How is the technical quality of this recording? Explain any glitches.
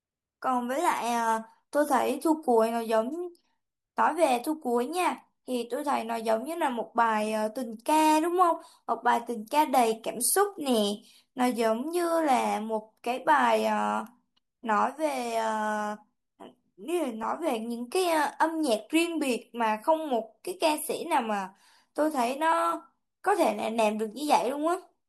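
One short glitch is audible in this speech recording. At 17.23 s there is a brief grainy smear lasting about 10 ms, consistent with a single lost LE Audio frame. The LC3 decoder filled the gap by reusing the previous spectrum with randomised signs, producing noise-like texture instead of clean sound.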